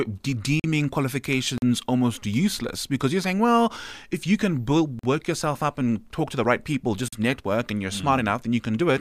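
At 0.60 s, 1.58 s (just before "almost useless because you're"), 4.99 s (between "well if you can" and "yourself up and talk") and 7.08 s (between "to the right people" and "network and you're mm"), the speech drops into a block of digital silence lasting about 43 ms. That length fits a missed 2048-sample buffer. The sound cuts out and back with no fade, so the gap sounds like a brief hole. On a waveform it is a dead-flat line, and on a spectrogram a blank vertical stripe with broadband spikes at both edges.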